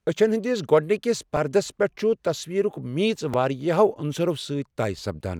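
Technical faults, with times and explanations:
1.37 s and 3.34 s, repeated buffer: a 1.45 ms slice, fitting a 64-sample buffer, replays four then two extra times, giving a brief buzz rather than a gap, with essentially nothing lost.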